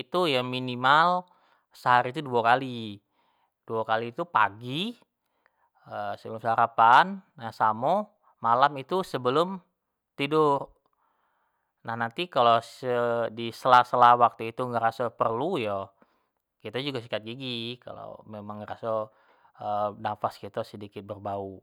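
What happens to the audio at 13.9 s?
A brief, gritty crackle rides the loudest peaks of the speech from 13.73 to 14.11 s. This is hard clipping: the signal overshoots what one stage can pass by about 2 dB, so its peaks are sliced flat, adding harsh high harmonics.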